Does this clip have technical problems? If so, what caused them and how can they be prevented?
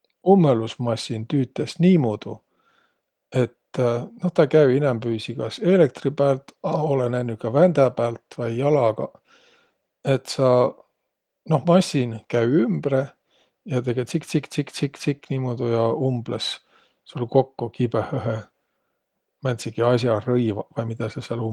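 No, the speech signal shows no technical faults: its band reaches about 20.3 kHz, and the light coding texture fits Opus voice compression in fullband hybrid mode at around 24 kbps.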